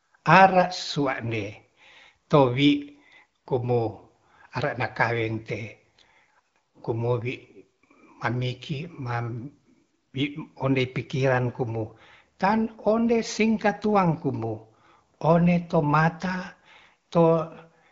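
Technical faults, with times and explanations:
Nothing here counts as a fault: the speech goes through the AMR wideband (HD Voice) codec at 12.65 kbit/s, the rate from which that codec is expected to hold up, and no problem turns up at any point.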